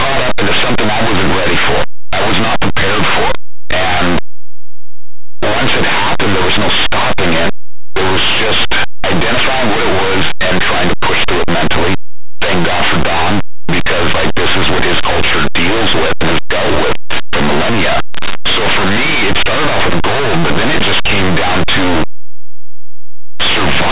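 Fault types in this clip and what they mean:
Linear audio read as companded: the speech was stored as plain 8-bit samples but decoded as if they were mu-law codes. Values just off zero on one side blow up to the largest outputs, so the whole clip, even the quiet stretches, comes out as very loud, harsh distortion.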